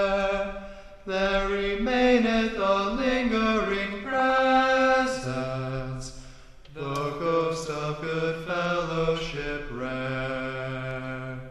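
From 4.03 to 4.39 s there is DAB burbling: bit errors, roughly 0.2 percent, slip past error correction into the MP2 data. Wrong samples put short blips of noise into single sub-bands, giving a burbling sound over the audio rather than the silence of a dropout.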